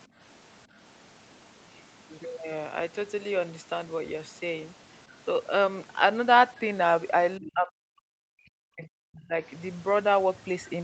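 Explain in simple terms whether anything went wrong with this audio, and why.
Two things went wrong. From 0.07 to 0.18 s, the background gated by the echo canceller makes the room sound dip for about a tenth of a second. The canceller briefly turned the microphone down hard while the loudspeaker was playing, then let go.

From 7.38 to 9.38 s, the speech drops sharply and is nearly silenced for about two seconds. This is likely speech suppressed in double talk: the canceller could not tell the talker from loudspeaker echo while both sides spoke, so it turned everything down.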